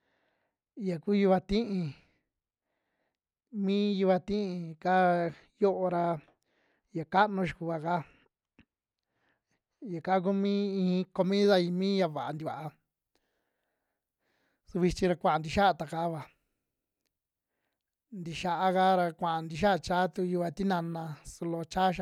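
From the start to about 11.21 s, the speech is dull and muffled. This is de-emphasis applied wrongly. A treble cut meant to reverse pre-emphasis was applied where none existed, or applied a second time. The response falls smoothly toward the top. At 10 kHz it sits about 11 dB below the level at 1 kHz. Sibilants lose their edge and consonants blur. The brightness returns after 11.21 s.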